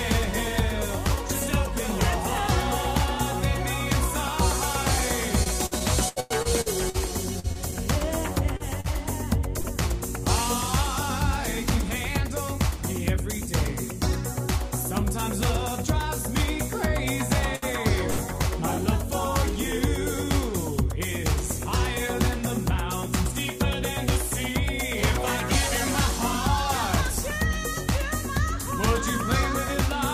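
From 5.43 to 9.67 s there is repeated packet loss, giving a robotic sound. Fourteen separate gaps open up across this stretch, each patched by carrying the previous sound forward. The longest gap runs to 104 ms. About 0.57 s is filled in, and 0.44 s of real content is simply missing. The audio turns choppy, with pieces missing. On a spectrogram, short smeared blocks with flattened, repeating harmonics alternate with brief dropouts. The waveform shows chopped segments and abrupt envelope steps.

Between 11.38 and 13.24 s a jitter buffer speed-up follows. The receiver held more audio than it wanted and trimmed short pitch-period slices repeatedly, roughly 50 ms in total, so playback runs at about 103% speed with unchanged pitch. On a spectrogram the harmonics stay at the same frequencies while events arrive a little closer together. The waveform shows tiny seams where cycles were removed.

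Two short stalls from late packets occur at 17.56 to 17.65 s and 18.10 to 18.21 s. In each, a packet arrived late, the buffer ran dry, and the last sound was stretched for 67 ms and then 74 ms before playback resumed from the same point, with nothing lost. Each one sounds like a brief held tone with a slight buzz or dip. On a spectrogram it appears as a short horizontal smear of frozen harmonics. The waveform shows a repeating cycle pattern with a slight level dip.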